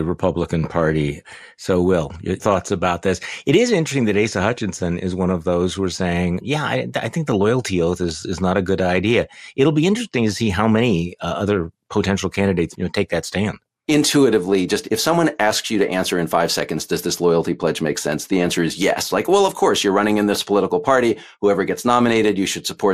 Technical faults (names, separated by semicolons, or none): MP2 compression; DAB burbling